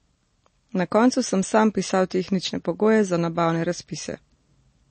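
From start to end, the speech carries plainly audible MP3 compression damage. Nothing sounds above about 8.3 kHz, a hard treble cut. Weak frequency detail flickers between frames, giving a watery, swirly texture. This likely comes from a starved encoder, fitting roughly 32 kbps.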